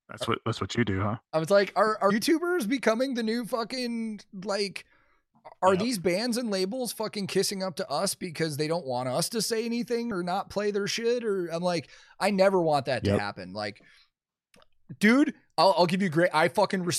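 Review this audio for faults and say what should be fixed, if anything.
A brief glitch breaks the speech at 2.09 s, between "I was like are" and "becoming the new fucking", and again at 10.10 s, between "us to say anything" and "not play their shit". This is damaged data in a compressed stream: corrupted bytes made the decoder misread frames and lose sync until it found the next valid frame header. Verifying the encoded file with checksums and re-fetching any corrupted segments before decoding would prevent it.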